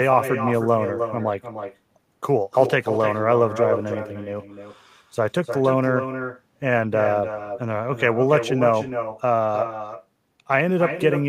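From the first second to the end, every bit of speech is trailed by a second, fainter copy arriving roughly a third of a second later. That's echo with no canceller: the far end is playing the call through a loudspeaker, their mic picks it back up, and nothing strips it out before it returns. The copy sits about 7 dB under the original and sounds thinner, so each phrase gets a hollow shadow.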